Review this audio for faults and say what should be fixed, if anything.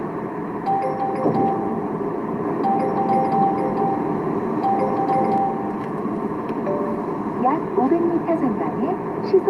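Doubled audio track, 2.44 to 5.38 s: a second full-band copy of the sound runs about half a second behind, at roughly the same level, with no decay or room colour, and cuts in and out abruptly. This is likely a slower capture path or an edit holding two copies out of step. To prevent it, make sure each source reaches the mix through only one path, and check edits for overlapping duplicate regions.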